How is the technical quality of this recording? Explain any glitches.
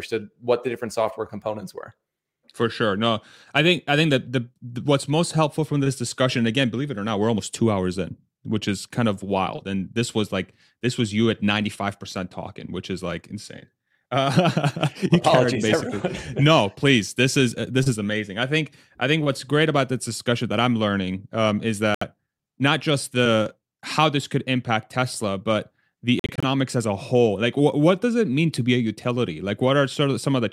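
The recording is interrupted twice by short gaps in the speech. A Bluetooth dropout, likely from packets not reaching the headphones in time, cuts out about 70 ms at 21.95 to 22.03 s, between "I'm learning um is" and "not just the how." A second cuts out about 116 ms at 26.19 to 26.45 s, between "but the" and "as a whole." That one is scattered into brief holes up to 46 ms long. Both gaps go silent, and the speech resumes as if it had played on.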